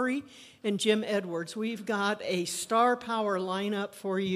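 No technical faults can be heard anywhere in this clip.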